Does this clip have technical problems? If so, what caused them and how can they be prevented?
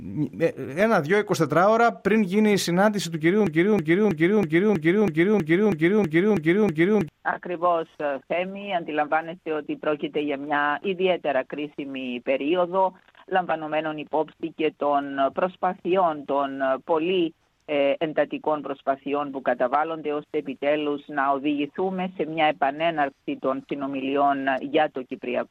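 Yes. A broken-record loop runs from 3.47 to 7.09 s: a fragment about 0.32 s long repeats exactly, back to back, 11 times, so the sound stutters in place for over three seconds. The pattern likely comes from a stall in the player, encoder or stream, which kept sending the last piece it held instead of new audio, and whatever should have played during that span is lost. To prevent it, give the playback or streaming path enough buffering and watchdog recovery that a stall outputs silence or resynchronises instead of replaying stale data.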